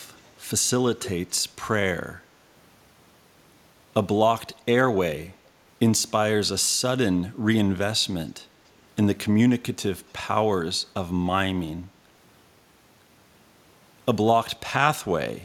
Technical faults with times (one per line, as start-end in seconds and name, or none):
0.17-0.30 echo leak
0.99-1.10 echo leak
9.99-10.03 echo leak